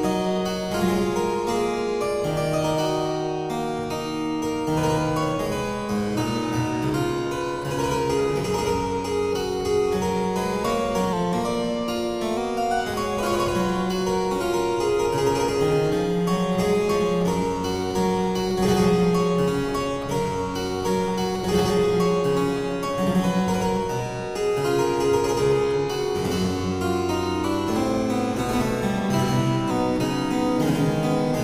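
From 11.13 to 12.37 s the sound slows by 5.49% and sinks about a semitone (-98 cents). From 27.44 to 29.71 s it runs 5.49% fast, about 93 cents sharp. Each is likely a drift correction step: clock-matching software abruptly changed playback rate to manage its buffer.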